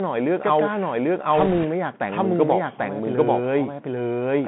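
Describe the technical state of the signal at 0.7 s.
At 0.7 s the doubled audio track is present, as it is throughout: a full-band second copy, roughly as loud as the original, lagging by about 0.7 s with no room colour. It's likely a second capture path or an out-of-step edit stacking two copies.

Over the whole thing, the Bluetooth CVSD headset codec squeezes everything into roughly 150 Hz to 3.4 kHz. Its one-bit up/down stepping can't keep pace with loud, fast high content, so sibilants go scratchy over a grainy hiss, damage consistent with a 64 kbps CVSD link.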